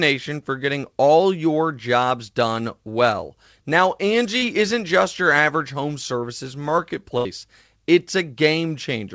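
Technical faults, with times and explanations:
4.38–4.44 s, short concealed packet loss: 40 ms of the call missed the decoder's deadline, so the receiver extended the preceding sound, heard as a brief smear.
7.18–7.27 s, burst of packet loss: consecutive packets went missing, so the receiver stretched the last sound for 67 ms while fading it, then resumed with 60 ms skipped.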